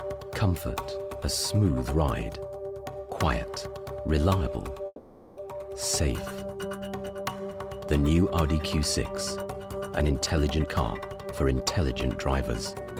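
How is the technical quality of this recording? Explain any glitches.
Two distinct glitches stand out, both tied to how audio was delivered over a network call.

Call audio freeze, 4.86 to 5.40 s: the sound stalls, and the receiver likely ran out of buffered packets and kept extending the last fragment while it waited. That fill lasts about 510 ms as a fading buzz or hiss, ending in a brief 20 ms silence. Nothing is lost when playback resumes, but everything afterward arrives about 510 ms later than before.

Jitter buffer speed-up, 10.61 to 11.80 s: a backlog of late-arriving audio built up, so the receiver trimmed many short pitch-period slices in succession to catch up, removing roughly a third of a second in total. The sound plays at about 123% speed with its pitch unchanged, giving this stretch a noticeably hurried, compressed feel.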